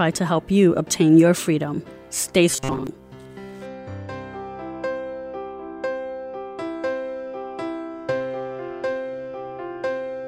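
From 2.49 to 2.87 s the audio turns into a rigid, metallic buzz locked at 133 Hz. It roughly tracks the underlying sound but loses its natural texture. This is robotic sound from repeated short buffers, likely caused by new audio arriving too slowly, so the playback side loops its last chunk instead of waiting. The 133 Hz pitch fits a segment of about 7.5 ms being cycled, and most of that stretch is repeats rather than real material.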